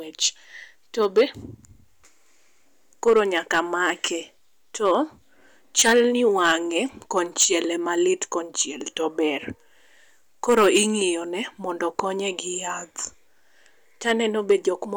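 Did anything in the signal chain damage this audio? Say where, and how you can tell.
Yes. The speech is hard clipped throughout, with the overload sitting at a gain stage ahead of the converter or at a sample-format conversion that cannot hold the level. The signal is driven about 10 dB past full scale, so the loudest peaks are sliced flat. Only a small fraction of samples, under one percent, hit the ceiling. The result is crackle on peaks rather than constant fuzz. Limiting or a codec would instead sound dulled or swirly. The flat tops add bright, high harmonics instead.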